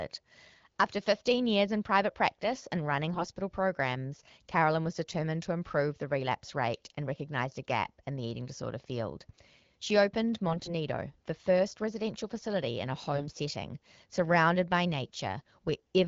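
AMR bit errors hit at 3.13 to 3.26 s after "private practice and running", 10.48 to 10.75 s before "the first residential facility", and 13.14 to 13.35 s after "residential facility in a". Flipped low-priority bits misplace the excitation pulses. The speech turns hoarse and gargly.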